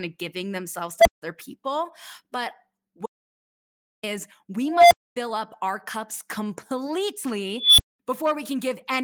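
At 1.00 s, right after "of giving themselves", an unstable filter runs away: bad recursive coefficients make a tone near 700 Hz swell to clipping within 56 ms, then overflow into 171 ms of silence. It repeats at 4.68–5.16 s (231 ms build, 256 ms silence, then "up our cups") and at 7.56–7.99 s, near 3 kHz (220 ms build, 213 ms silence). On a spectrogram, each appears as a bright horizontal line; the waveform balloons, squares off, then flatlines.

From 3.06 to 4.03 s, an audio dropout to silence removes 971 ms. The sound stops and resumes abruptly, with silence and no room tone between, likely because the input was lost while recording continued. The waveform is dead flat there, and the spectrogram shows a fully black gap.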